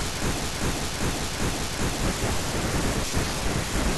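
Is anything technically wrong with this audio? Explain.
Yes. From 0.44 to 2.01 s, the speech falls into a broken-record loop. A 0.39 s fragment plays four times back to back, likely because a stalled player kept resending the last piece it held, so the original speech for that span is missing. On a waveform or spectrogram, four identical blocks sit side by side.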